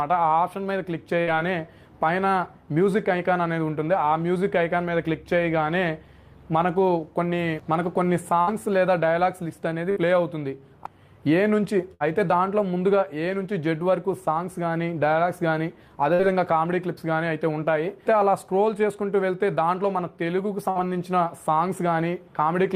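Six short dropouts land at 1.21, 8.41, 9.91, 11.94, 16.14 and 20.70 s. Each is a burst of packet loss. About 60 ms of audio never arrived in time, so the receiver stretched the last sound over the gap for roughly 50 to 60 ms and faded it out. You hear a brief smeared buzz or hiss, then the sound picks up a little further along. The last two stretch slightly longer.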